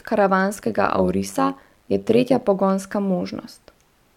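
Speech with overlap-add ripple from 0.55 to 2.44 s: mismatched frame overlap makes the level pulse by about 11 dB at around 100 Hz, a metallic buzz with extra tones around each note.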